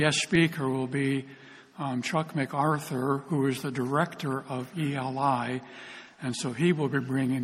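From 1.68 to 6.53 s, about four clicks recur every 1.62 s. These are likely clock drift buffer slips, with a few samples dropped or repeated each time.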